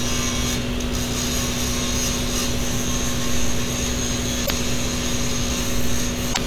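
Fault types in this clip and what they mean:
Damaged data in a compressed stream: a bit of the encoded file got mangled, so the decoder couldn't read the frames there properly, lost its footing and had to hunt for the next valid frame header. You hear it as a short glitch breaking into the sound, about 76 ms each time, once at 4.43 s and again at 6.30 s near the end.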